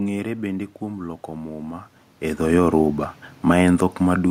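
From 2.37 s to 4.26 s, just after "kuom loko muma e", automatic gain falling pulls the level down by about 3 dB. Judging the input too loud, or its background noise too strong, the gain control eases back, so the room noise sinks along with the speech, unlike the talker's movement near 1.5 s.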